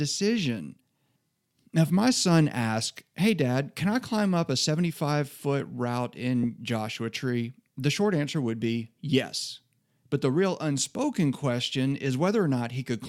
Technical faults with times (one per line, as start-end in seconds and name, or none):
6.43 compressed frames skipped